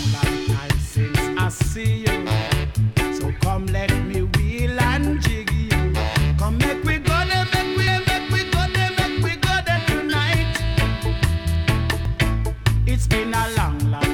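Two brief glitches at 7.87 s and 12.05 s point to damaged data in a compressed stream: corrupted frames there make the decoder misread the bitstream and lose sync, producing a short squawk or blip before it locks onto the next valid frame header.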